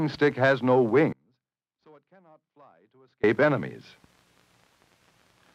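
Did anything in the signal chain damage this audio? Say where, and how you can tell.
Yes. An audio dropout to a faint residue runs from 1.13 to 3.24 s, about 2.1 s, most likely from an intermittent analogue connection. The signal cuts abruptly to a faint leak roughly 35 dB down, not a fade, and not digital silence, so the downstream path stayed live.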